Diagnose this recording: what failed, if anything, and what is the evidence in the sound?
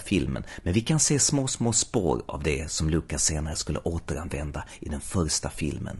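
The codec stage failed: throughout the speech the voice is plainly rough and grainy, with noise filling the gaps between harmonics. This is likely low-delay AAC compression. Short frames blur pitch structure at a rate that fits about 32 kbps. Unlike packet loss, the damage is constant, with no gaps.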